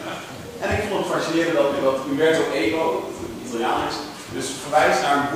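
Throughout, sample clock jitter of a few microseconds adds a rough hiss, about 30 dB down, that follows loud, bright passages and disappears in silence, unlike a steady noise floor.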